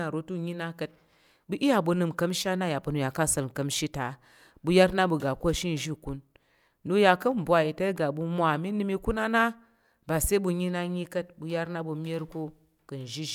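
No technical faults can be heard anywhere in this speech recording. There is nothing to point to at any moment of it.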